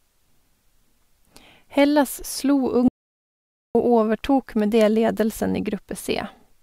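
Speech cuts abruptly to dead silence from 2.88 to 3.75 s, with no room tone: an audio dropout to silence, likely from a lost input link while recording continued.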